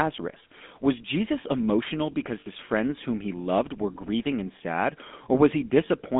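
Right through, the speech has the buzzy, gravelly grain of the GSM full-rate codec, squeezed into roughly 200 Hz to 3.5 kHz, which fits 13 kbps.

Lost GSM frames hit at 2.4 to 2.48 s, between "emotional because" and "friends whom he loved", and again at 4.58 to 4.61 s after "loved were grieving and". The decoder repeats its last good frame, so about 60 ms and 20 ms come out as a rough metallic ring.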